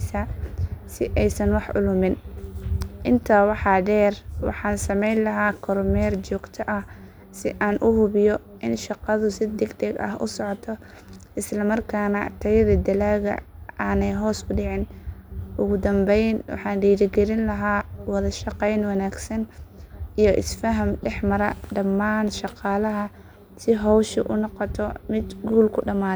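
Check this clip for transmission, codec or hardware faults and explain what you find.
No faults found anywhere in the speech.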